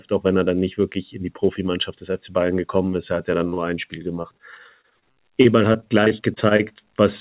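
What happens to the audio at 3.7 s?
Between 3.54 and 3.74 s there is a short concealed packet loss. A few hundredths of a second of audio reached the decoder too late. The receiver bridged the gap by extending the preceding sound, then blended back. It is heard as a brief smear.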